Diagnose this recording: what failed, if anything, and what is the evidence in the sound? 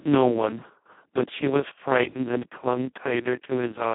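The failure is at the codec stage: Speex coding runs through the whole speech clip, with heavy damage. The voice sounds hoarse, buzzy and close to robotic. That fits the very lowest Speex setting, near 2 kbps, where almost no bits go to the excitation and the codec works much like a vocoder. The audio sits in a 150 Hz to 3.5 kHz line band, with nothing above 3.8 kHz. A plain band-limiting filter would narrow the sound but keep it clean. Here the roughness itself is carried inside the speech.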